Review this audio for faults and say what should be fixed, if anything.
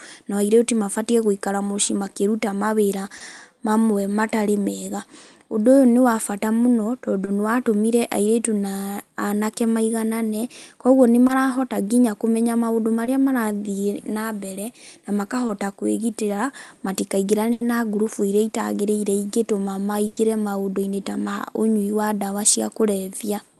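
There are five spots of short concealed packet loss, at 3.17 to 3.22 s (just before "mamwe matarĩ mega"), 7.25 to 7.29 s, 11.27 to 11.31 s (between "na anake maiganane kwoguo" and "nginya kũmenya"), 13.05 to 13.09 s, and 15.47 to 15.51 s. Each time about 20 ms of the speech never arrived, and the receiver papered over it by stretching the previous sound for 20 to 30 ms before blending back, so you get a quick smear or wobble. A bit more jitter buffer headroom or forward error correction on the link would stop these.

Then there are two bursts of packet loss, at 17.53 to 17.63 s, right before "na ngurubu", and at 20.07 to 20.19 s. Here a longer run of audio went missing, about 80 ms and then 100 ms, and the concealment carried the last sound across the whole gap as a held, fading tone before the speech picked up further along, with that stretch simply gone. Adding redundancy or packet retransmission, and sorting out the congestion on the network path, would prevent these.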